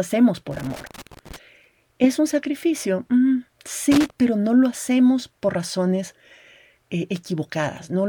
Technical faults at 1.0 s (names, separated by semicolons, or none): loose connector crackle